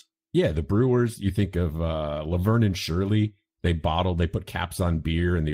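No technical faults occur at any point in the speech.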